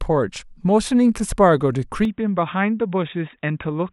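At 2.05 s the recording most likely switched its input to a poorer device, which stays in use until the end. From that instant the speech turns dull and boxy because the band is cut off with nothing above 3.8 kHz. The level drops by about 5 dB, and a faint new background noise sits far below the speech. The change happens without any gap, so the switch is heard as an abrupt shift in tone rather than a dropout.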